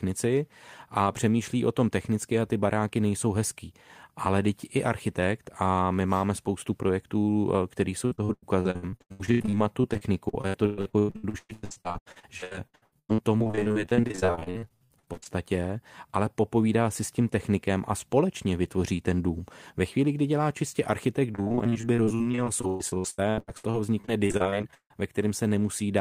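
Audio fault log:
8.05–15.27 s: repeated packet loss (robotic sound). Dozens of short dropouts, the longest about 116 ms, are each filled by extending the preceding sound. Nearly half the stretch is concealed, so the speech turns choppy.
21.31–24.97 s, starting right after "kdy dělá čistě architekt": repeated packet loss (robotic sound). Around forty concealed gaps, the longest about 155 ms, cover roughly a third of the span and give the same robotic, clipped texture.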